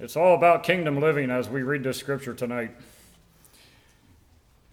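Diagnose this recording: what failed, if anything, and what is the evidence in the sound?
Nothing in the signal chain failed: the audio holds a continuous, steady signal with no dropouts, distortion, level jumps or timing disturbances at any point.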